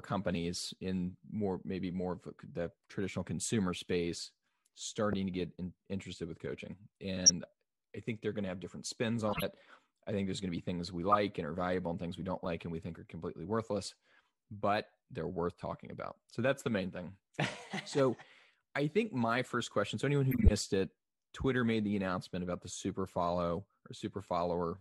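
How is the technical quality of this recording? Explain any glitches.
The recording has codec damage: five spots where corrupt frames were decoded and one where compressed frames were skipped.

The corrupt frame decoded errors fall at 5.10–5.14 s (just before "to get in interested"), 7.25–7.30 s (right after "in interested with coaching"), 11.08–11.18 s, 12.45 s and 20.31–20.51 s. Each hit spans a few frames. The decoder played flipped bits as if they were valid, throwing energy into the wrong frequencies, so each spot comes out as a short chirp, squeak, blip or noise burst, or a brief hole.

The compressed frames skipped fault sits at 9.27–9.43 s, right after "to have different spins". Some compressed frames never got played, so the audio jumps ahead by about 50 ms. The seam shows up as a quick smeared blip or a click.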